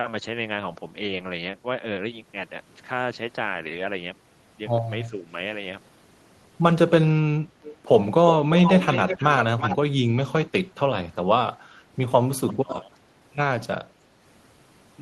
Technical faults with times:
5.10-5.33 speech suppressed in double talk
7.63-7.77 echo leak
8.56-9.77 echo leak
10.47-10.79 speech suppressed in double talk
11.24-11.29 speech suppressed in double talk
11.55-11.95 speech suppressed in double talk
12.47-12.98 speech suppressed in double talk

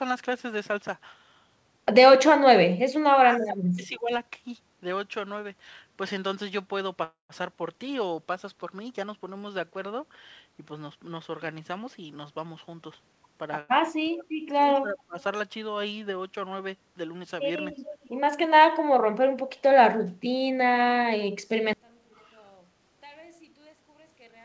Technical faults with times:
3.38-4.12 speech suppressed in double talk
3.50-3.57 echo leak
7.04-7.32 call audio freeze
11.59-13.45 jitter buffer speed-up
13.60-13.71 short stall from a late packet
13.99-14.27 speech suppressed in double talk
14.61-15.18 speech suppressed in double talk
17.74-18.09 echo leak
21.73-24.44 one channel inverted

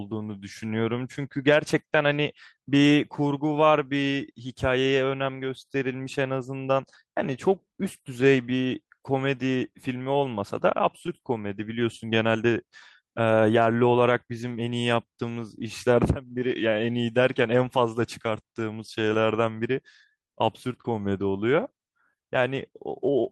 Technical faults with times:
0.00-23.31 clock drift between sender and receiver
0.09-23.13 repeated timing corrections

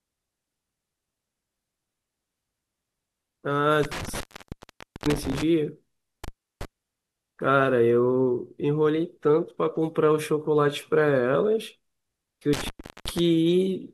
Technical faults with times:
3.83-5.43 intermittent contact
6.24-6.65 intermittent contact
12.53-13.19 intermittent contact

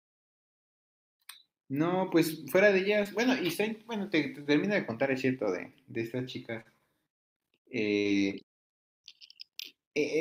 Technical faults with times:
3.03-3.07 short concealed packet loss
6.61-6.67 short concealed packet loss
7.99-8.07 burst of packet loss

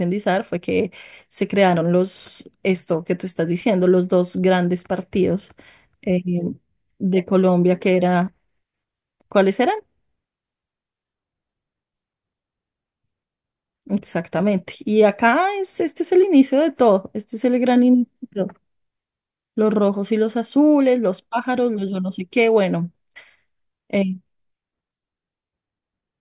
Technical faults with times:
none

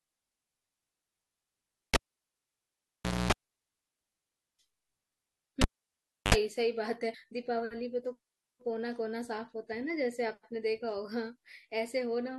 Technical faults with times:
1.58 damaged data in a compressed stream
1.94-3.32 cable pulled and plugged in
5.61-6.34 cable pulled and plugged in
7.13 damaged data in a compressed stream
9.71 damaged data in a compressed stream

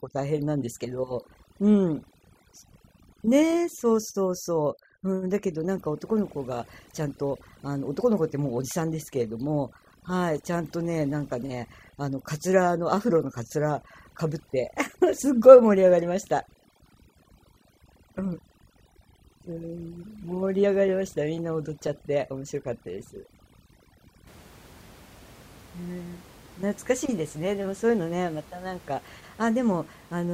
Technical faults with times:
0.00-24.27 overdone noise removal

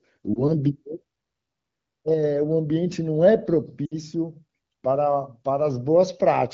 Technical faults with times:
0.33-0.43 lost AMR speech frames
3.86-3.95 lost AMR speech frames

